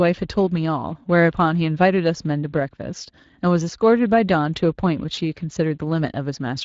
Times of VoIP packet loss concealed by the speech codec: 5.15-5.19

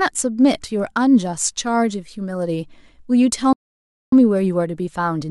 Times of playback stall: 3.53-4.12

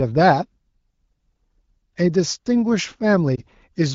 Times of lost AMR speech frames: 3.35-3.40

